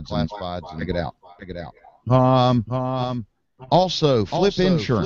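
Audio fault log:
Throughout, doubled audio track: there's a second full-band copy of everything trailing roughly 0.7 s behind, sitting about 10 dB under the original. It's a clean duplicate with no decay or room colour, so it reads as a distinct repeat rather than reverb or echo. The likely cause is the same signal reaching the mix twice, say through a slower second capture path or an edit that left two copies out of step.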